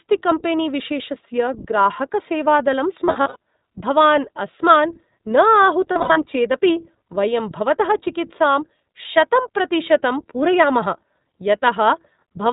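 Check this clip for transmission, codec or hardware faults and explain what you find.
Two problems here: the whole clip runs through the iLBC codec, and there are two bursts of lost iLBC frames.

iLBC codec: From start to finish the speech is band-limited with nothing above 4 kHz, and the damage is plainly audible, a slightly rough, synthetic edge. iLBC codes each frame's excitation on its own, and the sound fits its 15.2 kbps, 20 ms mode.

Lost iLBC frames: Between 3.04 and 3.36 s, and again between 5.92 and 6.18 s just before "चेदपि वयं भवतः चिकित्सां", packets drop out in scattered runs of up to about 70 ms. The decoder fills each gap by repeating the last pitch cycle mixed with noise, so you hear brief held, buzzy vowels. Because iLBC frames stand alone, the speech snaps back cleanly right after each loss.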